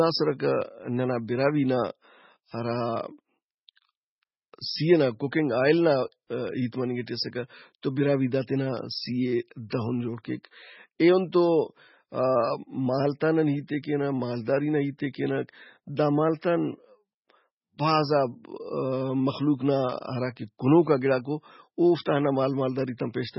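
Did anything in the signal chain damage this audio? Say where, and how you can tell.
Yes, at the codec stage: throughout, the speech stops dead above 5.6 kHz and swirls watery, likely heavy MP3 compression fitting roughly 16 kbps. A plain low-pass filter wouldn't warble like that.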